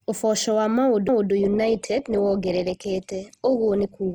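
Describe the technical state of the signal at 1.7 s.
At 1.7 s the adaptive stream is at a lower bitrate, from 1.39 s to the end. A sudden, gapless switch removes content above 12.2 kHz, consistent with Opus dropping from 64 to 16 kbit/s.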